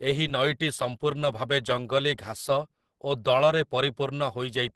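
Speech with Opus compression damage plainly audible throughout: nothing survives above about 12.2 kHz, and the voice sounds muffled, hoarse and grainy, which fits the encoder's hybrid speech mode at a low rate around 16 kbps, likely starved for bits.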